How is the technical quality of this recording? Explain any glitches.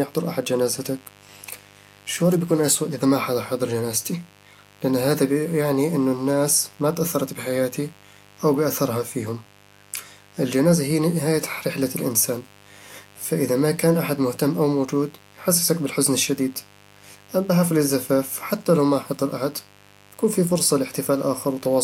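The recording is marred by mains buzz running from start to finish under the speech. Interference from the 50 Hz power supply has leaked into the signal path as sharp switching spikes, two per mains cycle, so 100 a second. Because the spikes are so abrupt, they carry a dense ladder of 50 Hz harmonics reaching up into several kHz. The result is a steady, raspy buzz, not a smooth hum, sitting roughly 30 dB below the speech.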